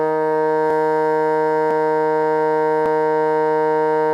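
A music clip with three abrupt skips, at 0.70, 1.71 and 2.86 s, each with the music jumping forward by around 20 ms. This is likely a dropped buffer (overrun): audio was lost and the edges were spliced together, so there is no silent gap as an underrun would leave.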